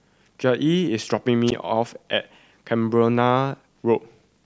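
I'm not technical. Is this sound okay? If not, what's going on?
No. At about 1.47 to 1.52 s there is a wireless microphone squelch dropout: the radio link from the microphone briefly weakened, so the receiver shut off its output. The speech drops into near silence for about 13 ms, then returns.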